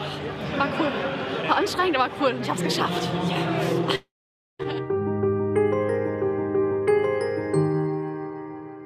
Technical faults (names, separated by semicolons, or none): long network dropout